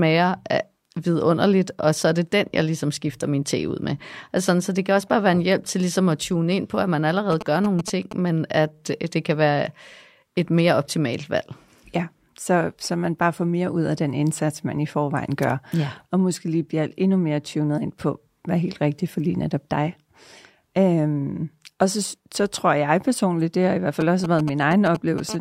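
A speech recording with GSM signalling bursts from 7.32 to 8.13 s, after "ind på at man", and from 24.01 to 25.20 s, after "det har i hvert". These are galloping ticks and short 217 Hz buzzes, roughly 10 dB below the speech, from a nearby 2G phone's radio bursts being rectified in the audio circuit. A brief GSM phone buzz follows from 25.29 to 25.36 s: a hard, raspy 217 Hz tone at about 11 dB below the speech, caused by the same rectification of a phone transmitting in bursts 217 times a second during a call.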